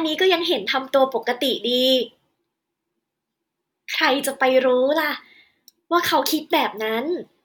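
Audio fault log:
No faults detected in this clip.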